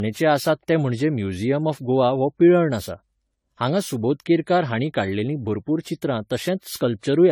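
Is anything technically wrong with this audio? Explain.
Yes. Generation loss runs throughout: the speech was likely decoded and re-encoded around fifteen times, each pass quantising on a shifted frame grid so noise and spectral holes pile up. It sounds swirly, hollow and smeared, with blurred attacks and nothing above 17.8 kHz, which fits 64 kbit/s AAC-LC.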